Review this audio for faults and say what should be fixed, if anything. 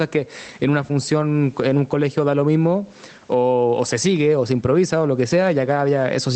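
Gain pumping runs through the whole clip. Loud and soft parts end up closer in level, and the sound is squashed. The level swings by around 10 dB. The likely cause is microphone gain set far too high, with a fast limiter clamping it down. Lower the input gain so the limiter rarely engages.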